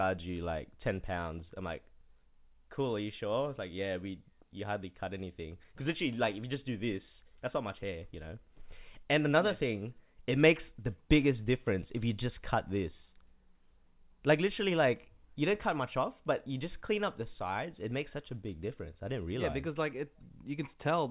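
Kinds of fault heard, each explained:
No faults heard in the speech; the call path leaves nothing above 4 kHz, which points to narrowband telephone coding such as G.711.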